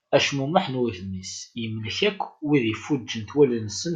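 Nothing stood out on listening to this speech recording.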